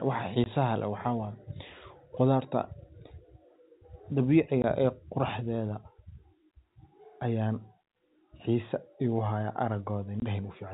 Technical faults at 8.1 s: none

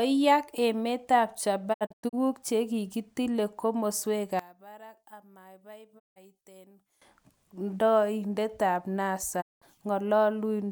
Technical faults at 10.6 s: none

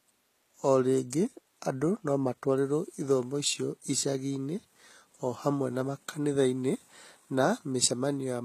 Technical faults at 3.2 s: HE-AAC compression

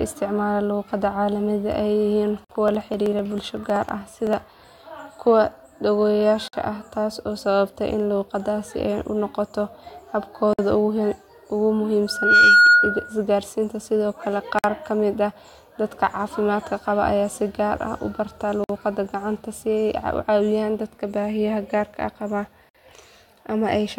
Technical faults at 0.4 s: none

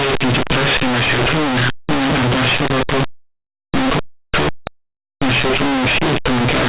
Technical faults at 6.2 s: linear audio read as companded

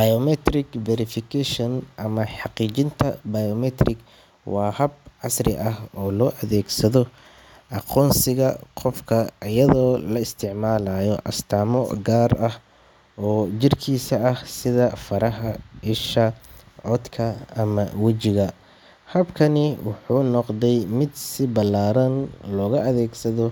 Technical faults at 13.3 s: none

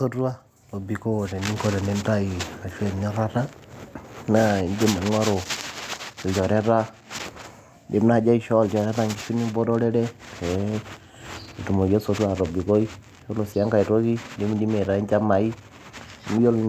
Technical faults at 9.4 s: none

